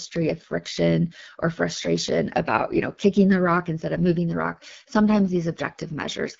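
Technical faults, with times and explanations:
Throughout: AMR wideband (HD Voice) codec. The speech is plainly rough and raspy. Its roughness fits one of the codec's lowest modes, around 8.85 kbit/s. The codec models speech up to 6.4 kHz as pulses driving a vocal tract filter. It fills 6.4 to 7 kHz with shaped noise. At so few bits the pulses and filter are coarsely coded, giving the grainy texture. Nothing is heard above 7.5 kHz, so the top end sounds dull.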